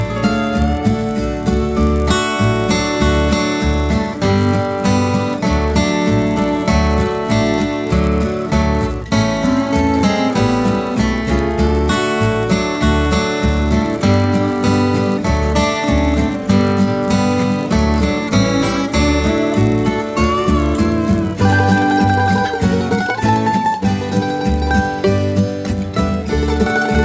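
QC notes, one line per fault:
Throughout, resampler restarted on every block: each 10 ms chunk was converted on its own, so every edge lacked its real neighbours and carries a small error, most likely from a 48 kHz to 16 kHz conversion. These repeat as a 100 Hz buzz riding under the sound whenever there's signal.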